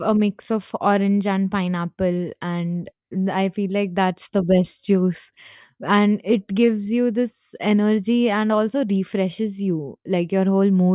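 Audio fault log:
No audible faults detected in the speech at any point.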